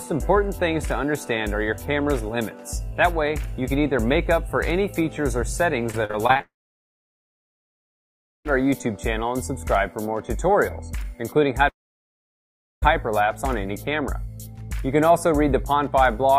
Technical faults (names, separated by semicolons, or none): repeated packet loss (robotic sound); long network dropout